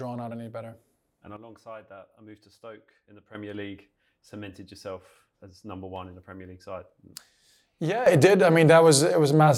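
At 1.37 s the speech and its background noise drop together by about 10 dB in a single step, recovering just as abruptly at 3.35 s; at 8.06 s both jump up by about 11 dB and stay there to the end. This is a sudden gain jump, likely a gain setting applied without a ramp. Unlike automatic gain control or a fade, there is no gradual slope: the level change is instantaneous, and the noise floor moves with the speech.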